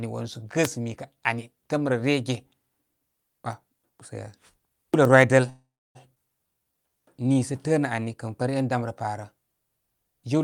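From 0.63 to 0.67 s a brief swish of static cuts across the speech. This is a wireless microphone noise hit: the analogue FM radio signal faded as reflections cancelled one another, so receiver noise rose for about 46 ms.

At 5.49 s the last sound hangs on as a fading buzz, then drops to about 0.29 s of silence before the speech resumes at 5.97 s exactly where it paused. This call audio freeze inserts a 0.46 s gap and loses nothing. Delayed packets likely left the jitter buffer empty.

From 6.15 to 6.18 s the audio jumps forward, with roughly a third of a second of speech gone and the two sides joined almost seamlessly. This skip ahead happened because that stretch was discarded while later audio was already queued, leaving only a tiny splice.

From 6.47 to 8.55 s, just before "dani rə parə", the speech drags at about 89% speed while its pitch stays unchanged, stretching sounds out by about 245 ms. 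This jitter buffer slow-down came from the receiver repeating single pitch periods to rebuild its reserve.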